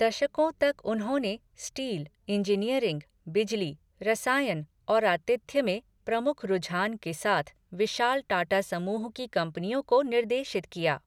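No technical faults can be heard anywhere in the recording.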